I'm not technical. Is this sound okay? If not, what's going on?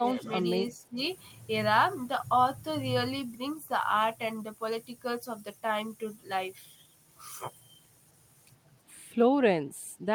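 No. Near the very start, from 0 to 0.32 seconds, and again from 0.74 to 0.98 seconds, the speech briefly drops in level for a moment. This is most likely speech suppressed in double talk: someone on the other end of the call spoke at the same time, and the echo canceller, unable to separate this voice from the returning echo, turned both down.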